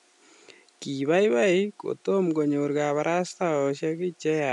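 No technical faults are audible.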